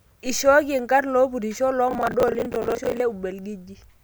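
From 1.91 to 3.0 s, just after "ishooki enkarn lopurisho", processor overload crackle tears through the speech. The processor misses dozens of buffer deadlines, each gap filled by replaying stale audio with hard edges. The grain points to buffers of roughly 10 ms.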